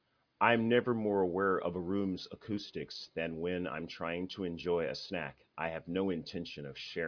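Listening to the speech recording, nothing stood out as a technical fault at any point.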